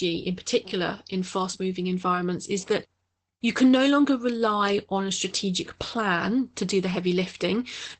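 Opus voice compression runs through the whole clip. Nothing sounds above about 8.5 kHz, so the top is muffled. The SILK speech coder codes the excitation coarsely, leaving hoarse, slightly robotic speech. This fits a low bitrate near 12 kbps.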